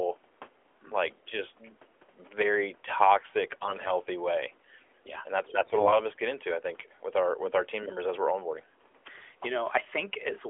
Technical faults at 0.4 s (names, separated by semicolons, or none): none